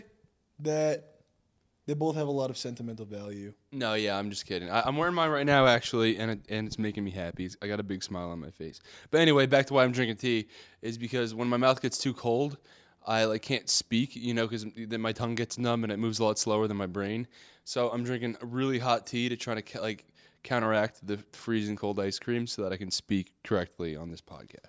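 No technical faults can be heard anywhere in the recording. Nothing in the signal path calls for comment at any point.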